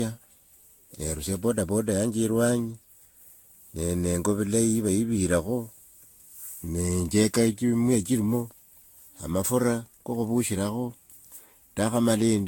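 Throughout the speech there is generation loss. The sound is swirly and hollow, with a watery smear over the whole band. Consonant attacks are blurred rather than crisp. Nothing reaches above 19.2 kHz. The damage is heavier than one moderate-rate pass would leave. It points to Vorbis at roughly 70 to 80 kbit/s, likely decoded and re-encoded around seven times. Each new pass quantised on a shifted frame grid, so the noise piled up.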